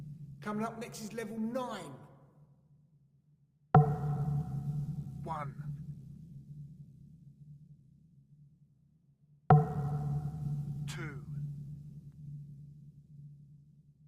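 No technical fault can be heard anywhere in this audio; the signal stays steady and continuous throughout.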